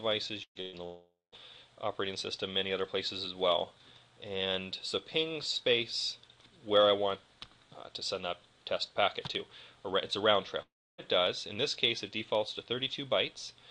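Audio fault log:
0.43–0.58 s and 0.61–0.76 s, burst of packet loss: Two short gaps, each of about 120 ms, sit close together. In each, the receiver keeps repeating the last sound and turns it down, so a held buzz or hiss fills the hole. The first fades to silence for its last 80 ms. The second stays filled to the end. The sound then resumes further on, with the part in between gone.
0.85–1.35 s and 10.62–11.01 s, long network dropout: The sound stops for about 480 ms, then later for about 360 ms. Each gap opens with a fading buzz or hiss as the last sound is stretched out, and it ends in plain silence, about 190 ms in the first gap and 290 ms in the second. The sound returns further on without the lost stretch. The likely cause is a network outage that stopped audio arriving altogether.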